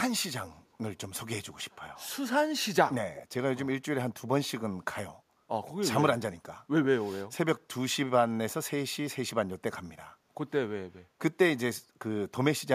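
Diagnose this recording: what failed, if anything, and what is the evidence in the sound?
Echo leak, at the call-processing stage. Two brief delayed copies of speech appear: one at 0.72 to 0.76 s, about 40 dB below the speech, and one at 3.15 to 3.26 s, about 15 dB below it. Both trail their source by about 0.37 s. The likely cause is a far-end loudspeaker whose echo canceller let part of the played voice back into its microphone. On a spectrogram, each shows as a weaker repeat of the harmonic pattern, shifted 0.37 s later.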